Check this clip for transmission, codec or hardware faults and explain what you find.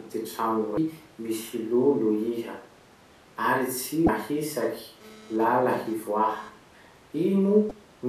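Two kinds of fault are present in this speech clip: three short bursts of damaged data in a compressed stream, and a stretch of GSM phone buzz.

The damaged data in a compressed stream appears at 0.75 to 0.78 s, 4.06 to 4.09 s and 7.68 to 7.71 s, each about 30 ms long. Corrupted bytes make the decoder misread frames and lose sync until it finds the next valid header, which produces brief chirps or squawks. On a spectrogram each shows as a narrow vertical smear of broadband or oddly tonal energy. The waveform has an abrupt discontinuity there.

The GSM phone buzz runs from 4.60 to 6.49 s at about 23 dB below the speech. A nearby 2G phone transmitting data in bursts 217 times a second has its radio pulses rectified in the audio circuitry, producing a hard, raspy buzz unrelated to the speech. Because this is a data transfer, the buzz comes and goes. A spectrogram shows a comb of harmonics spaced 217 Hz apart switching on and off, and the zoomed waveform shows regular pulse trains.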